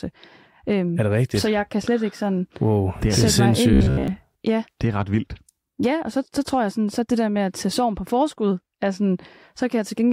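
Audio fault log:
3.73–4.08 s, robotic sound from repeated short buffers: the speech collapses into a rigid metallic buzz at 66.8 Hz, likely from one roughly 15 ms chunk looping over most of that stretch.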